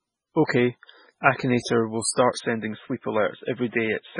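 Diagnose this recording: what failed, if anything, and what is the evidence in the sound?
MP3 compression, throughout: the whole clip has a watery, swirling texture with heavy codec damage, attacks are smeared, and nothing remains above 10.3 kHz. At the codec stage, a very low bitrate, which fits about 16 kbps, likely forced the encoder to zero weak frequency lines frame by frame and cut the treble.

Input switched to a poorer device, from 2.38 s to the end: the speech turns dull and boxy, with nothing above 3.8 kHz. There is no gap at the switch and no audible level jump, and a new noise floor sits far below the speech. At the driver level, capture likely moved to a narrower-band microphone or headset call profile.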